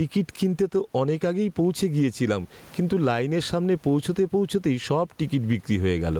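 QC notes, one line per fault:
throughout: gain pumping. The room background, sitting about 41 dB below the speech, swells up in each pause and ducks under every loud syllable, a swing of around 15 dB, leaving the speech squashed. Likely cause: microphone gain set far too high, with a fast limiter clamping each peak.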